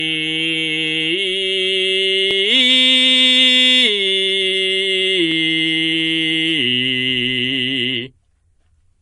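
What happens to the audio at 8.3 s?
At 8.32 s the music gives a brief click, a tiny stutter where a sliver of sound seems to jump back and play again. This is overlapping chunks: the audio was handled in 3-second pieces, and the piece beginning here starts slightly before the previous one finished, so about 6.5 ms is heard twice at the join. Two copies of the same waveform spliced back to back produce that sharp discontinuity.

Around this moment, as across the whole clip, the music sounds watery and swirly, with smeared attacks and a metallic chirp on bright sounds, and nothing is heard above 10.6 kHz. This is likely MP3 compression at a low bitrate, one that fits roughly 40 kbps. Short of bits, the encoder removes everything above a fixed treble limit and zeroes weaker frequency lines, which flicker on and off between frames and create the swirling.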